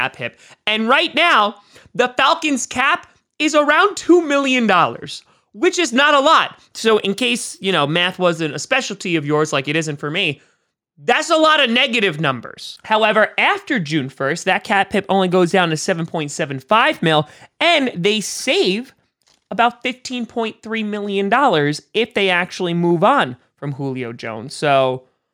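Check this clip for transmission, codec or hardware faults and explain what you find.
No faults can be heard anywhere in this speech recording. There is nothing in the audio that calls for further explanation.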